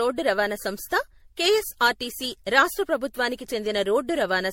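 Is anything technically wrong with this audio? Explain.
Yes. Throughout the speech there is generation loss, likely from repeated MP3-style encoding around several passes deep. Each requantisation lands on a shifted frame grid, so artefacts pile up into swirly, hollow smearing and blurred consonant attacks, worse than one low-bitrate pass. Nothing is heard above 16.5 kHz.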